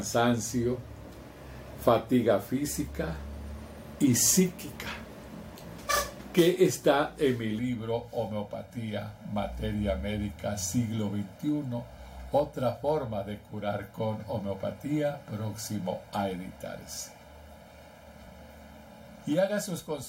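From 7.59 s to the end, the audio turns hollow and phasey, the sign of channel delay (comb filtering). One channel arrives roughly one and a half milliseconds late, and when the two are summed to mono, the shared content cancels at a series of evenly spaced frequencies, the first around 400 Hz. Unlike a flanger or phaser, whose notches sweep, these notches stay fixed, so the coloration is static and constant rather than moving.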